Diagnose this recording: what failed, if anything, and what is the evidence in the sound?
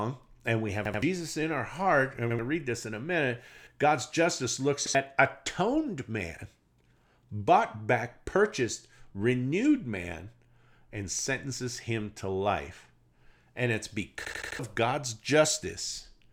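Playback buffer underruns at the driver caused a repeated buffer: the last block of about 85 ms, which fits a 4096-sample buffer, replayed with hard joins. Stutters sound at 2.30, 3.58 and 4.86 s, with two and four extra repeats at 0.85 and 14.25 s, skipping roughly 0.1 to 0.3 s of speech.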